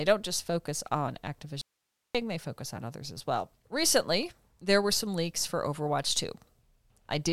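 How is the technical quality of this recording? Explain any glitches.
The recording has one clear glitch, an audio dropout to a faint residue. From 1.61 s to 2.15 s the speech cuts out abruptly for about 0.53 s. Only hiss remains in the gap, roughly 50 dB below the normal signal. Then the speech returns just as suddenly. The cause is likely a brief loss of the wanted signal while the path after the break stayed live, so its own noise kept passing through. The hard edges make it sound unlike a natural pause or a fade.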